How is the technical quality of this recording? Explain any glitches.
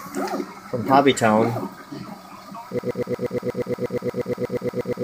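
There's one real problem. From 2.79 s right through to the end, the audio falls into a broken-record loop. A chunk of about 0.12 s repeats exactly, back to back, 19 times. The likely cause is a stalled player or stream resending its last fragment, so whatever should have played after 2.79 s is simply gone.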